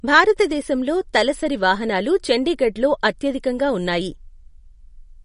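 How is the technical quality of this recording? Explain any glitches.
The recording is marred by clearly audible lossy-compression damage throughout, which points to MP3 compression. The likely cause is an MP3 encode at a low bitrate, consistent with about 40 kbps. There is no content above 10.5 kHz, because the encoder cut the treble there to save bits. Weaker frequency components also drop in and out from one frame to the next, so the speech takes on a watery, swirly quality. Sibilants sound metallic and chirpy, and consonant attacks are smeared.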